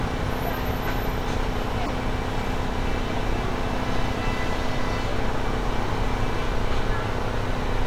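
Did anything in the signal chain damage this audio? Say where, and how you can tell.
Yes, in the codec: corrupt frame decoded. Short bursts at 1.86–1.89 s and 3.16–3.19 s, peaking around -15 and -20 dBFS, come from damaged frames decoded with misread spectral data.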